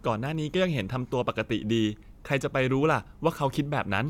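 Nothing in the speech signal points to a technical fault: level, continuity and timing hold steady for the whole recording.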